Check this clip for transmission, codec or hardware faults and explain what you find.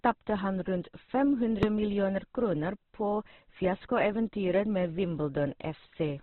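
Two faults are audible in this speech clip.

Throughout: Opus compression, likely run at a low rate near 12 kbps in its CELT music mode. Heavy coding narrows the bandwidth, so the speech sounds muffled, rough and grainy.

At 1.63 s, just before "millioner kroner på fiaskoeventyret": invalid numbers at full scale. A calculation failed and a block of about 1.33 ms, consistent with 64 samples, was forced to maximum level. It is heard as one sharp bang.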